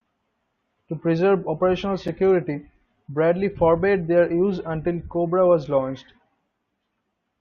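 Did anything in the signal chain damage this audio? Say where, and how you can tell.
Yes. At 2.08 s there is a gap between stream segments: a hard-edged silence of about 8 ms at the playback stage, where the timestamps of adjacent one-second segments fail to meet and the player fills the space. Unlike a packet dropout, no sound is lost; the speech resumes exactly where it stopped.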